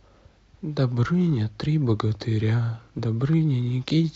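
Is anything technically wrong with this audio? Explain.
Yes. At 2.98 s the speech has compressed frames skipped. A short stretch, roughly 40 ms, never reaches the output, which points to about five whole frames that were missing from the stream or rejected as damaged by the decoder. Playback lands further along and resumes there, and the speech seems to lurch forward slightly.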